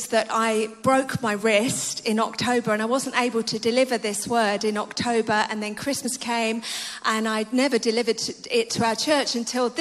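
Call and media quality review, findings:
Compressed frames skipped at 6.04 s: audio jumps ahead about one 23.2 ms frame. Frame missing from the file or refused by the decoder.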